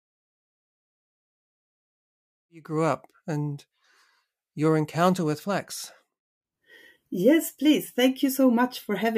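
Nothing's wrong here as far as the ear can tell: the speech comes up gently from about 2.5 s, easing in by about 3.07 s as an edit would, and there are no technical faults to point to anywhere in the clip.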